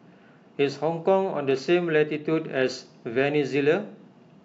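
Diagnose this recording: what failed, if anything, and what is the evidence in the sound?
Channel delay (comb filtering) appears from 1.38 to 2.38 s. In that stretch the speech turns dull, with the upper treble pulled down and sibilance softened, then clears again. The dip sits at around 10 kHz, which fits one channel arriving roughly two samples late, about 0.05 ms, before the pair is folded to mono. Energy common to both channels cancels at that frequency. This points to a converter or buffer-alignment slip between channels.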